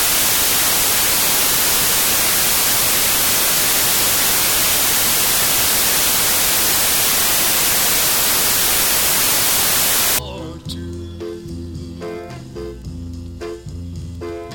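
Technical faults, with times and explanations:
0.00–10.19 s, samples built from the wrong bytes: a loud, harsh wash of broadband noise. The reader is assembling each sample from mismatched bytes, off by one, in swapped order, or at the wrong alignment, so the rapidly fluctuating low-order bits land in the most significant position. Small, random detail becomes large swings, turning the signal into broadband hiss.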